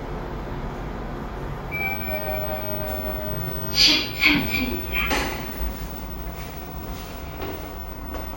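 No technical faults are audible in this recording.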